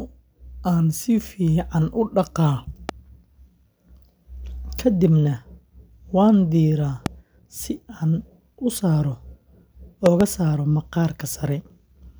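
Loud pops land at 2.89–2.91 s, 7.06–7.08 s, and a double one at 10.06–10.23 s, jumping roughly 10 to 15 dB above the speech. They're likely voltage spikes from a plug, switch or static discharge.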